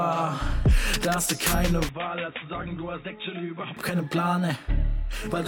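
From 1.89 s to 3.77 s the sound turns dull and boxy, drops roughly 10 dB and gains a faint new hiss, most likely because the input switched to a poorer device. A spectrogram shows a hard ceiling at 3.8 kHz and the waveform visibly shrinks, with no gap at either switch.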